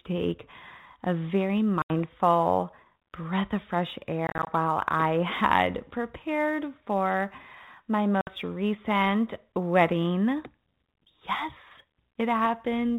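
Throughout the speech there is sample clock jitter. The timing of the converter's sampling wanders by roughly 2 microseconds, so each sample lands slightly early or late. The resulting error tracks how steeply the waveform is changing and sits about 40 dB below the signal. It is heard as a faint rough hiss that swells on loud, bright syllables and disappears in pauses. On a spectrogram it shows as a broadband haze that appears only under speech energy and is strongest at high frequencies.

Packet loss on an ADPCM call, over a narrowband path limited to 4 kHz, first strikes at 1.82 to 1.91 s, right after "take a very". About 80 ms drops to hard silence. At 4.27 to 4.50 s, between "breath of fresh" and "while I had prepared", about 100 ms is lost in several short gaps spread over 200 ms, the longest about 30 ms. At 8.21 to 8.29 s, between "had prepared for my" and "recent wedding", 60 ms vanishes. 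Each gap appears as a flat-line break in the waveform and a vertical blank stripe on the spectrogram. Because the decoder's predictor and step size drift out of step with the sender's, the speech returns slightly distorted, then settles within tens of milliseconds.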